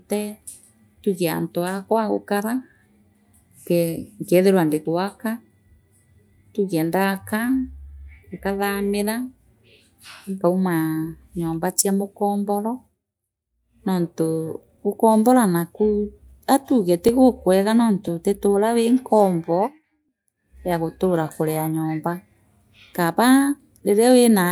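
Between 17.09 and 20.08 s the speech carries small, evenly spaced ticks about once per second, roughly four in all. These are periodic USB or driver dropouts: a blocked bus or driver skips around two milliseconds of audio each time, splicing the signal abruptly.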